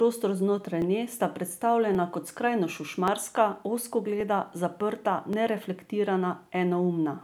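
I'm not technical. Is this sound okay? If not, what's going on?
No. Clock drift buffer slips: regular clicks in the speech from 0.82 to 6.46 s, about every 1.13 s. Two devices likely run on slightly mismatched clocks, so their shared buffer drifts until a tiny bit of audio is skipped or repeated.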